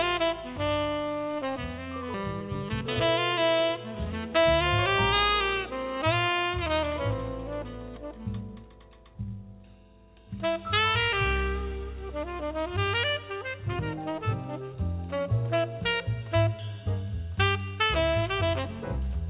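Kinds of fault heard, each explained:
Skip ahead: At 2.14 to 2.16 s the playback jumps forward. Roughly 0.7 s of audio never plays, and the material on either side is butted together with no silence and no concealment fill. A stretch of audio was dropped while later audio was already queued. Unlike a dropout or packet loss, there is no gap, muffled patch or repeated fragment, only a sudden discontinuity where the sound runs on from a different point.
Jitter buffer speed-up: From 2.24 to 4.13 s, just after the jump, the sound runs at about 109% speed. The receiver trims short pitch-period-sized slices again and again to drain excess buffered delay, removing about a fifth of a second in total. Pitch stays where it was, which separates this from a resampling or clock-rate error that would raise pitch along with tempo. The passage sounds hurried, and its band still ends at 4 kHz from the G.711 path.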